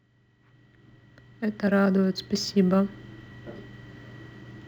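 Throughout the speech, a fine hiss and roughness rides on the louder, brighter sounds and vanishes in the pauses. This is sample clock jitter: the converter's timing wanders by a few microseconds, so samples land slightly off, leaving error about 35 dB below the signal.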